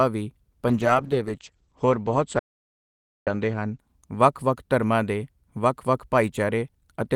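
A call bitrate drop runs from 0.69 s to 4.81 s, ending just before "ਦੇ ਵੱਖ ਵੱਖ". The bandwidth estimate sagged, so the encoder had to code the speech with far fewer bits. The sound turns coarse and watery, and the top end collapses from 20 kHz to about 8 kHz, which fits a fall from roughly 40 kbps to 10 kbps. The duller, rougher sound is worst for about 2.5 s before recovering.

An audio dropout to silence cuts in at 2.39 s and lasts until 3.27 s, a gap of about 0.87 s falling inside the degraded stretch. The speech stops abruptly and resumes mid-flow, and the gap is dead silence with no room tone underneath. The input signal was lost while writing continued, most likely from a momentary link failure or disconnected device, and whatever was said in that gap is gone.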